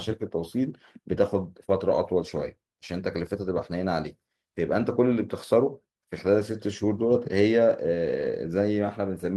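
No audible technical faults.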